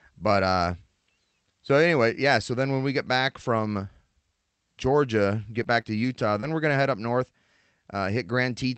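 A speech clip with scattered short gaps between 5.49 and 6.70 s. Packets went missing here and there in that stretch, about three small holes, none longer than roughly 20 ms. The receiver bridged each one by stretching the sound just before it. About 60 ms of audio was lost, and 200 ms was rebuilt around it, adding 19 ms. You hear brief ticks and smeared hiccups. The call path shows an 8 kHz top end, which fits Opus at around 40 kbps.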